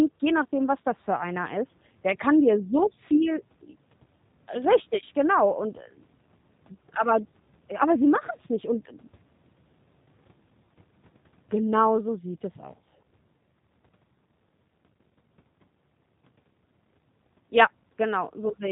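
Speech, and the whole clip runs through the G.729 codec, with damage you can plainly hear from start to finish. Everything above 4 kHz is gone, so it's got that narrow telephone sound, and the voice comes out a bit rough and synthetic. That's because the codec rebuilds each 10 ms frame from a vocal tract model, a pitch predictor and a handful of pulses instead of the real waveform, which fits an 8 kbit/s stream.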